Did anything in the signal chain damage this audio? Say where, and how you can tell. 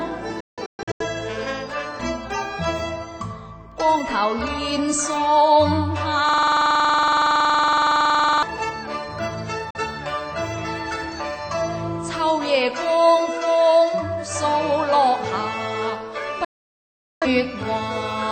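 Yes. Sound cuts to silence with 3 ms fades at 0.40–1.05 s (scattered holes), 9.70 s and 16.45–17.27 s: a digital broadcast dropout, with the receiver muting on lost frames.

From 6.29 to 8.43 s a 46 ms fragment repeats as a rasping 21.5 Hz buzz. This is a system hang loop at the driver or buffer stage, which fits a 2048-sample buffer.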